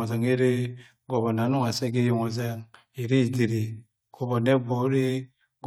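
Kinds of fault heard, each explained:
Nothing wrong turns up here; the speech just runs along without a single glitch or dropout to point at.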